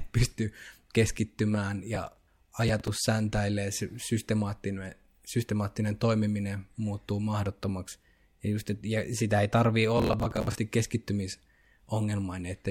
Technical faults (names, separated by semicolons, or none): processor overload crackle